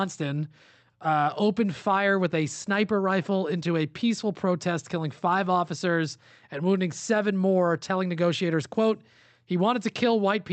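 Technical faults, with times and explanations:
No technical faults can be heard in this speech.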